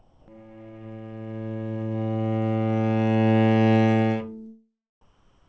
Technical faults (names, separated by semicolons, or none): comfort noise in place of the background